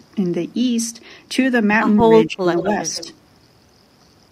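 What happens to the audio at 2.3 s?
Around 2.3 s an echo canceller has most likely been confused by double talk: with both ends talking at once, it mistook the near talker for loudspeaker echo and attenuated everything it heard. The result is speech suppressed in double talk from 2.26 to 2.46 s, about a fifth of a second in which the voice sinks sharply, by roughly 25 dB at its deepest, before returning to full level.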